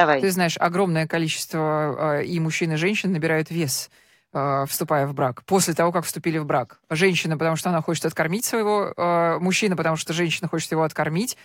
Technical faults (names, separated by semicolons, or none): none